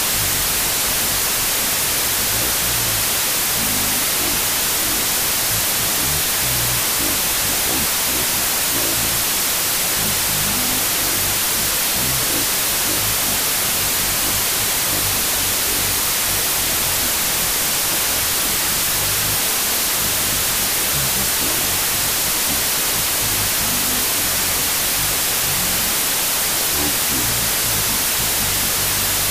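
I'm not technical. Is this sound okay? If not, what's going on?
No. The whole clip has a fault called wrong sample width. The audio was stored in one format but is being read as if each tiny slice of sound were a different size. That fits 32-bit samples read as 16-bit. Each real slice turns into two, so the speech plays at half speed and an octave lower. Most of the mixed-up values come out as loud noise, with the speech buried underneath from start to finish.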